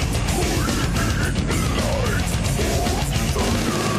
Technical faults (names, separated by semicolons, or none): none